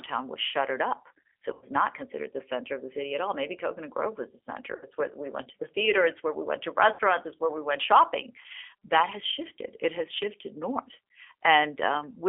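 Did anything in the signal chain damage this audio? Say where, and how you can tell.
Yes. At the codec stage, G.729 at 8 kbit/s rebuilds speech from a filter and pulses, leaving 300 Hz to 3.4 kHz audio that sounds plainly rough and synthetic.

On the network, VoIP packet loss was concealed by the speech codec at 1.53–1.65 s before "not considered the center", 4.76–4.85 s after "was the", and 6.93–7.01 s before "it's where we went". The decoder stretched its last frame into a fading buzzy tone or coloured noise.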